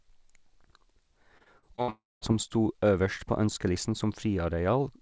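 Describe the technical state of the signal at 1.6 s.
At 1.6 s the signal sits inside repeated packet loss from 1.38 to 1.90 s, just before "som sto øverst på". Five gaps, the longest 61 ms, are patched by extending prior sound, giving choppy, robotic audio.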